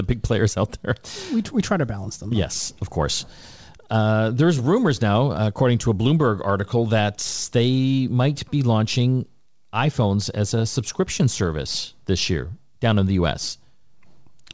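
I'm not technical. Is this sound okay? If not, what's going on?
Yes, this speech sounds fine: it has the slightly muffled quality of an ordinary internet call, with nothing above about 8 kHz, and there's nothing wrong to point to.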